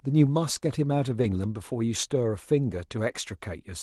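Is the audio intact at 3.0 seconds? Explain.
Yes, the speech at 3.0 seconds is intact, with no dropout, glitch or other fault at that moment.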